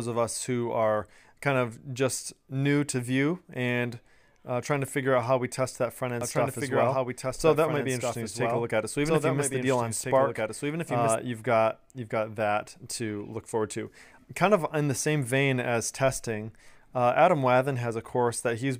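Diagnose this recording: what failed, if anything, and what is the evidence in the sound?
Doubled audio track, 6.21 to 11.15 s: an abrupt, dry copy trails about 1.5 s behind, roughly 5 dB quieter, likely captured again through a slower path.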